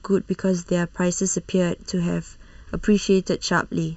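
Throughout the speech, channel delay (comb filtering) leaves a hollow, phasey tone: one channel trails the other by under a millisecond, so summing to mono cancels shared content near 700 Hz and at evenly spaced frequencies above, drawn as fixed dark horizontal notch bands on a spectrogram.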